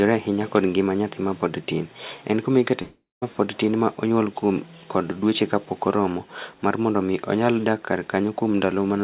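Speech, carried over a call path whose G.711-style narrowband coding leaves nothing above 4 kHz, with one clear break: right after "kuma ikete" at 2.82 s the sound smears into a buzzy continuation that fades out, then sits in near-silence for about 0.19 s before resuming at 3.24 s on "mapod tin ma onyuol". That's a long network dropout, likely packets that never arrived. The receiver papered over the gap, and roughly 0.4 s of speech is simply gone.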